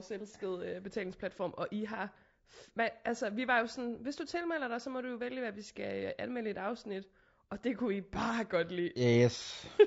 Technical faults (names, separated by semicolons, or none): low-delay AAC compression